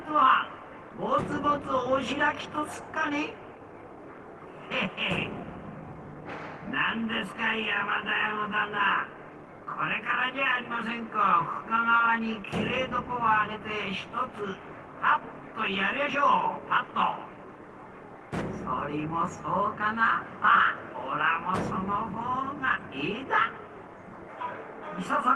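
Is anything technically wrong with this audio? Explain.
Yes, there is one short concealed packet loss. From 11.97 to 12.01 s, about 20 ms of audio never reached the decoder, and roughly 17 ms of it was filled by extending the preceding sound before blending back. It is heard as a brief smear or wobble. On a spectrogram it appears as a thin band of smoothed, repeated texture, and the waveform shows a short stretch of continued sound.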